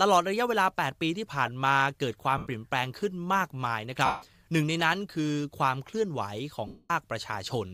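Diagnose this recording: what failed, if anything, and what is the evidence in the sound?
Lost LE Audio frames on the Bluetooth link. The speech smears into noise at 2.38–2.47 s, 4.05–4.22 s and 6.67–6.90 s. The decoder repeats the last spectrum with random signs, then fades. The gap lengths fit 7.5 ms frames.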